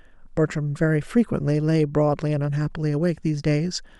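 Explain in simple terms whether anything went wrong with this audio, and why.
Nothing in this recording of speech stood out as going wrong when I listened to it.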